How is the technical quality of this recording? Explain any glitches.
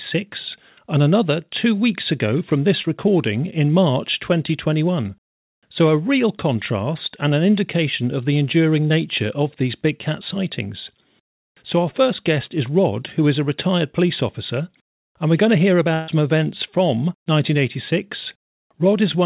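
The recording came through a narrowband call path with nothing above 4 kHz, which fits G.711 mu-law at 64 kbps. It has two packet-loss glitches.

Short concealed packet loss, 2.82 to 2.86 s, between "two weeks ago from" and "recording in": about 20 ms of audio never arrived. The receiver extended the preceding sound for 17 ms, giving a brief smear.

Burst of packet loss, 15.94 to 16.10 s, after "we're going to hear" and before "events from": 140 ms went missing. The receiver filled it with a continuation of the last sound that fades as it goes, with no silence, and then speech resumes past the lost stretch.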